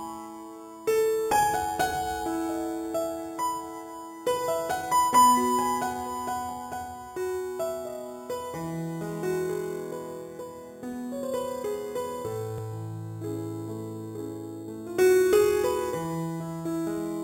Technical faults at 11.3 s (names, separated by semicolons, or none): imaging from sample-and-hold upsampling